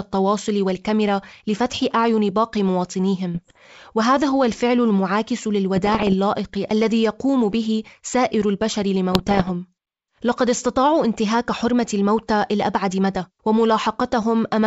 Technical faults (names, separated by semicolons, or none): bit errors on an ADPCM link